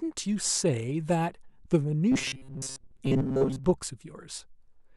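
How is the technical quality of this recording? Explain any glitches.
The recording has one clear glitch. From 2.12 to 3.64 s the speech becomes a robotic sound from repeated short buffers: a rigid metallic buzz at 134 Hz. It is likely caused by late audio being replaced with loops of a roughly 7.5 ms chunk for most of that stretch. The spectrogram shows a fixed comb of 134 Hz harmonics, and the waveform shows identical repeating cycles.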